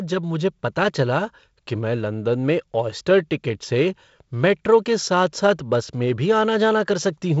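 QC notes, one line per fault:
Nothing stood out on listening to this speech clip.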